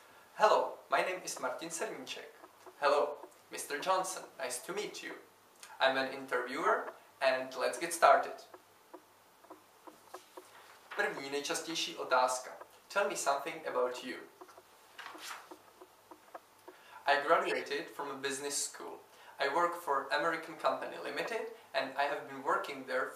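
Four brief glitches at 3.13, 6.62, 13.88 and 17.45 s are corrupt frames decoded anyway, with damaged bits throwing energy into wrong frequencies. The 6.62 s glitch is loudest and the 3.13 s one faint.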